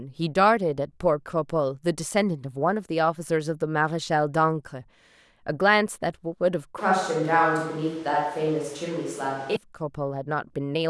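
From 6.79 to 9.56 s the speech abruptly turns roomy, hollow and bass-light, with background noise about 25 dB below it, likely a switch to a distant microphone; the hard cuts both ways, with no level change, distinguish it from gradual reverb or filtering.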